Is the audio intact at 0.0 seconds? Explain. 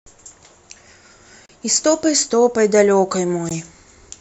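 Yes, the audio is intact at 0.0 seconds, with no dropout, click, distortion or other fault at that moment.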